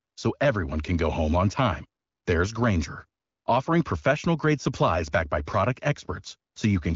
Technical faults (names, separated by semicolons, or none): none